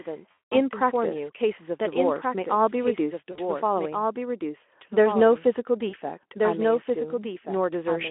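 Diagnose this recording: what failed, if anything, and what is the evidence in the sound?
A doubled audio track runs throughout: a second full-band copy trails by about one and a half seconds at about 5 dB lower, with no reverb tail. The likely stage is capture or editing, where a slower path records the audio again. A spectrogram shows every pattern repeated, shifted right.

VoIP packet loss concealed by the speech codec, a network fault, occurs at 0.32–0.53 s, 3.31–3.39 s and 5.89–5.95 s. The decoder extends its last pitch and filter into a buzzy tone or coloured noise that fades, and stays weak afterward. On a spectrogram, harmonics flatten into horizontal streaks. The waveform shows repeating periods shrinking in amplitude.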